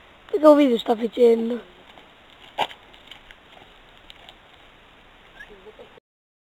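Crude rate conversion runs through the whole clip, from the first second to the last. The sample rate appears to have been raised without a proper filter, simply repeating the nearest existing sample to fill the gaps, which fits a change from 44.1 kHz to 48 kHz. The resulting timing error forms a repeating pattern that produces shifted, inharmonic copies of the material, sitting roughly 30 dB below the signal. It comes through as a gritty fizz that follows the louder and brighter moments.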